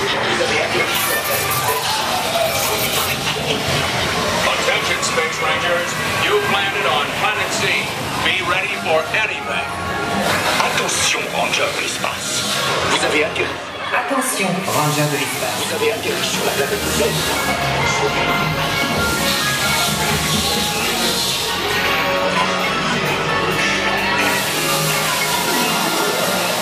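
From 18.30 s to 22.12 s there is a crude rate conversion. The audio was resampled by repeating samples rather than filtering, and the pattern fits a nearest-neighbour jump from 32 kHz to 48 kHz. Every third output sample is a duplicate, so the waveform takes on a fine staircase texture. The error sits roughly 15 dB below the signal and is heard as a gritty, inharmonic fizz that tracks the louder, brighter moments. A spectrogram shows mirrored images folding across the band over that span.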